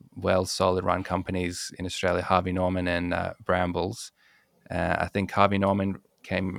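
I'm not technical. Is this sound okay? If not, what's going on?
Yes, nothing in this recording stood out as a problem when listening to it.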